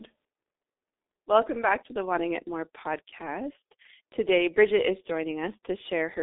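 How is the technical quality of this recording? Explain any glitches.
Pretty rough, honestly. The whole clip runs through a G.723.1 codec. Nothing gets through above about 3.8 kHz, and the band sits roughly between 250 Hz and 3.7 kHz, so the speech is muffled and thin at the bottom. The codec chops the signal into 30 ms frames and tracks the voice with a coarse, slow-updating model. You hear heavy damage: a hoarse texture and smeared consonants, which fits a bitrate around 6.3 kbit/s.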